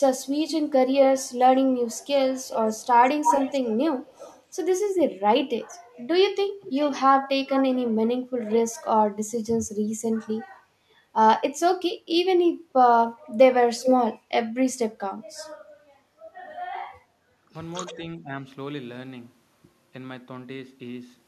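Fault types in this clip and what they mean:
Echo leak: A loudspeaker-side echo canceller likely let part of its microphone pickup through, sending it back. The speech is trailed by a delayed copy, about 185 ms late early on and 379 ms later, roughly 10 dB down, with a brief louder burst near 13.8 s.
Background gated by the echo canceller: While the loudspeaker played, the echo canceller clamped the microphone down hard. The room background dips by about 6 dB for around 70 ms near 17.1 s, then comes back as the canceller releases.
Speech suppressed in double talk: With both sides talking at once, the canceller likely could not separate its own talker from loudspeaker echo and turned both down. Between 17.44 and 18.33 s the speech sinks by about 10 dB in pieces totalling about a third of a second.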